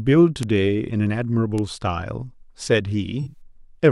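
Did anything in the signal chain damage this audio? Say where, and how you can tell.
Yes, two separate things got at it. First, a couple of bit error spikes, at 0.43 s and 1.58 s. Each one is a single sharp tick, broadband and unrelated to the speech around it. That's a single flipped bit in storage or on a digital link, which throws one sample off by a power of two before it snaps straight back.

Second, from 3.22 s to 3.38 s there's a corrupt frame concealed by the codec. It spans about 0.16 s. The AAC decoder spotted damaged data, which points to a run of several consecutive frames, and papered over it by muting or smearing.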